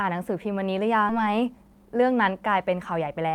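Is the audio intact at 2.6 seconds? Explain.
No. At 2.6 seconds the speech sounds hurried, running about 11% fast while the pitch stays unchanged. This is a jitter buffer speed-up lasting from 1.19 to 3.22 s. The receiver's buffer had built up more audio than its target, so to cut the delay it removed short pieces of one or a few pitch periods, many times in a row. Across the span this drops around a fifth of a second of sound.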